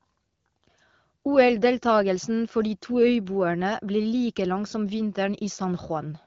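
Nothing stood out on listening to this speech, which has the band-limited top of a wideband HD Voice (AMR-WB) call, with nothing above about 7.2 kHz.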